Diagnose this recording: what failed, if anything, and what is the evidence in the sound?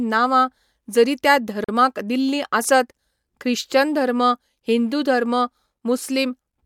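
The driver/buffer stage slipped here. Between "जरी त्या" and "दिल्लीं आसत ख्रिश्चन धर्म" the speech drops into a block of digital silence from 1.64 to 1.69 s, about 43 ms, cutting out and back with no fade. That fits one 2048-sample output buffer left unfilled in time.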